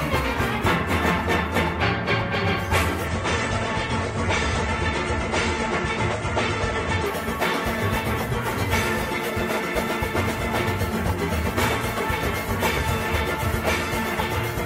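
At 3.06 s the sound turns abruptly dull, with nothing above 9 kHz, and a swirly, metallic graininess appears; at 7.06 s full brightness snaps back, with no gap at either edge. This four-second stretch is an adaptive stream at a lower bitrate: the player switched to a leaner encoding while the connection slowed, and the loss of treble and the added artefacts fit a step down from about 96 to 32 kbit/s AAC.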